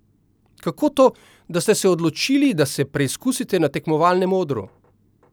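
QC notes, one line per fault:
No technical faults are audible anywhere in the signal.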